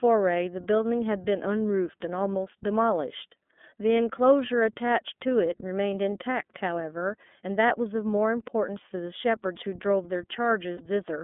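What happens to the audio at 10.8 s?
From about 10.77 to 10.81 s a single frame is lost, roughly 30 ms of signal, and the iLBC decoder conceals it. It replays the last pitch period blended with noise, so the gap comes out as a short held, faintly buzzy tone instead of silence or a click. That separates it from a plain dropout. Because each iLBC frame decodes independently, the sound snaps back to normal straight after, with no smeared recovery like that of codecs whose frames depend on earlier ones.

Around that moment, and for the whole clip, the iLBC codec itself is plainly audible. The band runs only from 200 Hz to 3.5 kHz, which gives the thin telephone quality. The speech also has a slightly rough, synthetic texture from coding the excitation frame by frame. The 13.33 kbps rate fits iLBC's 30 ms frame mode. This steady narrowband roughness differs from packet-loss damage because it never comes and goes.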